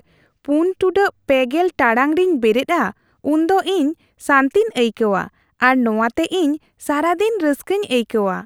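A speech recording, with nothing technically wrong in it.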